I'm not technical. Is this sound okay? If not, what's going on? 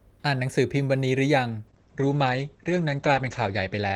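No. From 1.69 s to the end there's a call bitrate drop: the speech turns rough and muffled because the connection forced the audio into far less data, cutting detail above 8 kHz. Unlike dropouts, nothing goes silent; the sound simply stays coarser.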